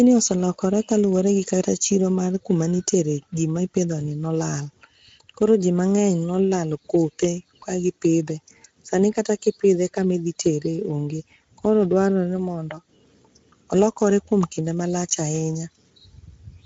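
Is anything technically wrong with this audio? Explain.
Yes, the whole clip carries Speex codec damage. Speex is a CELP speech coder, and here it's short on bits for the excitation, so the speech comes out noticeably noisy and hoarse throughout, which fits a Speex mode running at about 17 kbps.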